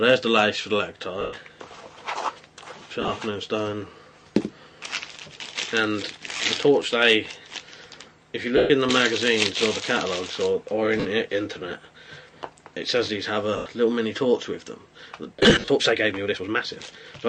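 Bluetooth LE Audio frames were lost at 1.21 s (120 ms), 3.01 s (60 ms scattered over 100 ms), 6.37 s (30 ms), 8.57 s (130 ms), 11.00 s (50 ms), 13.57 s (90 ms) and 15.36 s (170 ms over 320 ms). Each time, the decoder filled the gap by repeating the last spectrum with scrambled phase, so tones blur into a brief noisy smear, fading on the longer losses.

From 15.09 s onward, a time-stretched section runs about 1.36 times faster at unchanged pitch, likely from software squeezing the audio by dropping short pieces. The result sounds rushed. The light lossy compression beneath stays faint.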